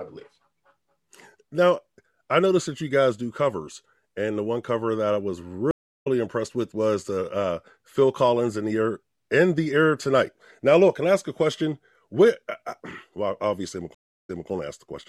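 At 5.71 s the audio drops out for about 0.35 s, a stream reconnect. The connection broke, the player went silent, then reattached and started a new decoder mid-stream. When sound returns at 6.07 s it has jumped ahead by roughly 0.4 s, so that stretch of speech is skipped. A second stream reconnect at 13.95 s gives a 0.34 s gap, but here playback resumes 0.21 s earlier than where it stopped, repeating a short piece of speech before continuing to 14.50 s.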